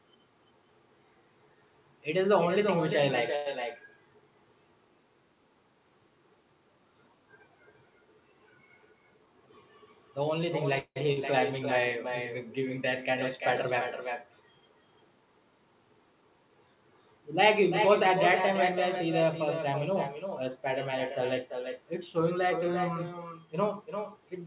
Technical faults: echo with no canceller; short stall from a late packet; call audio freeze; burst of packet loss; jitter buffer speed-up

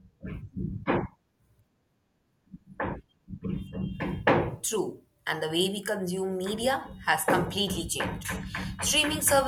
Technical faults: none

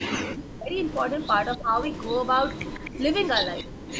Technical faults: speech suppressed in double talk; echo leak

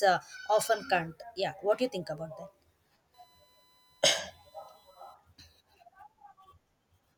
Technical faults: USB whine

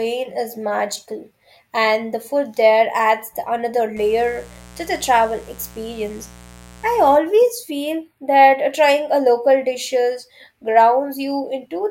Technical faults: mains buzz; channel delay (comb filtering)

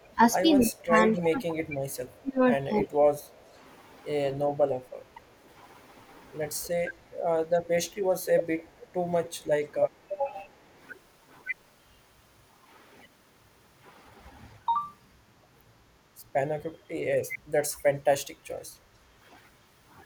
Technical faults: echo leak; speech suppressed in double talk; background gated by the echo canceller

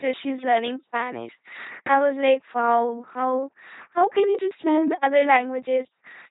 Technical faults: LPC-10 vocoder

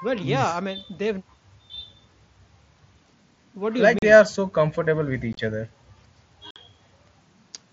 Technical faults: unconcealed Bluetooth headset packet loss

